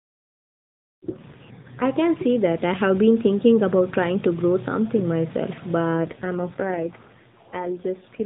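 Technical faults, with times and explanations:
1.02–1.88 s and 5.95 s to the end, AMR rate drop: speech goes buzzy and synthetic, same band, no gap, sounding like 12.2 falling to 4.75 kbps; first recovers before "can see that I".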